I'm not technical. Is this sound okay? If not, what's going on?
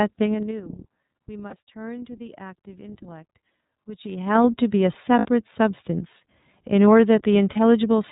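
No. The whole recording has passed through the iLBC codec, a phone-call compressor. It removes everything above 4 kHz, so the speech sounds narrow and slightly rough and synthetic. The artefacts are plainly audible, and the sound is consistent with 30 ms frames.

There are also lost iLBC frames, where pieces of the call went missing and the decoder covered them with a brief held, buzzy sound. This happens at 1.49 to 1.54 s, 5.19 to 5.26 s and 7.53 to 7.57 s, with normal sound returning almost immediately.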